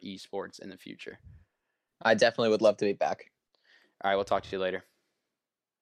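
Repeated frames at 4.46 to 4.51 s: a 26.1 ms slice of speech plays twice more, consistent with one compressed frame resent, causing a brief stutter and adding 52.2 ms.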